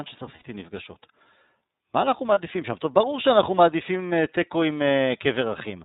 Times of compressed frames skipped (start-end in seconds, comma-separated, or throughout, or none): none